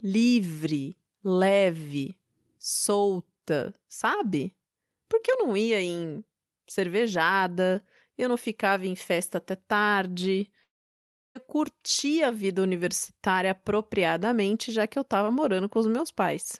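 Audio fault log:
10.63–11.38 s: long network dropout, likely cause, after "em festa até tarde"; the tail fades to near silence and the speech resumes at "curtir a vida universitária" with about 0.7 s missing, unlike a brief packet glitch.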